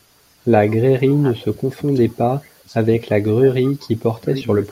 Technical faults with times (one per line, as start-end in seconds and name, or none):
0.95-1.83 speech suppressed in double talk
2.13-2.69 speech suppressed in double talk
2.44-2.49 echo leak
3.00-3.84 speech suppressed in double talk
3.66-3.71 echo leak
4.16-4.38 speech suppressed in double talk